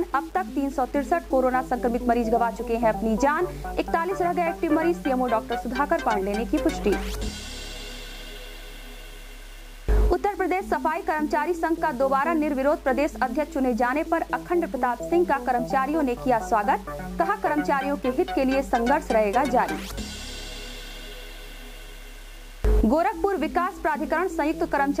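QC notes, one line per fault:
Throughout, low bit depth without dither: there's a grainy, gritty distortion riding on the sound that shifts as the sound changes, and it's roughest in the quiet stretches, where the tail ends sputter between a couple of steps or drop out to silence. Likely cause is a 7-bit signal that's been rounded with no dither, so the error tracks the audio rather than sitting as steady hiss, landing around 30 dB under the signal.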